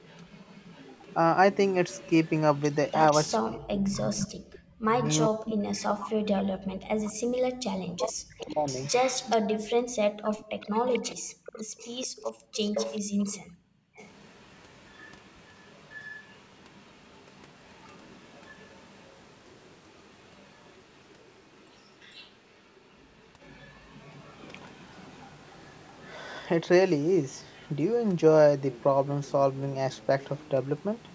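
A speech recording from a call, band-limited to 8 kHz by the call's microphone processing. Echo leak runs through much of it. A faint copy of the voice trails about 443 ms behind. It sits roughly 25 dB down from 0.0 to 3.32 s and from 8.39 to 26.11 s. It rises to about 10 dB down from 4.56 to 5.93 s, and a brief scrap returns at 27.62 to 27.71 s. The likely cause is a loudspeaker echo canceller on the far side that let some of its pickup through. From 3.36 to 8.68 s there is speech suppressed in double talk. The voice dips and breaks up in pieces for about four seconds in total, falling as much as about 40 dB. This is likely the echo canceller pulling everything down while both sides talked at once. Background gated by the echo canceller occurs at 9.77 to 10.25 s and 11.16 to 13.96 s. The room sound drops away by up to about 40 dB, for roughly 1.5 s of the second span. It comes back when the canceller releases its hold on the microphone.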